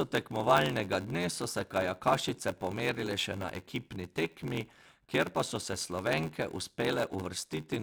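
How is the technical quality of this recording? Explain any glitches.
Not great: there's one fault running through the whole speech clip. It's a block size mismatch (padded): an upstream stage hands over shorter blocks than the next stage reads, which fits a 512-sample read, and the shortfall gets zero-filled. That puts a tiny gap in every block, giving a steady buzz at about 86.1 Hz, and the speech drags at 0.861 times normal speed while the timbre stays about where it should be.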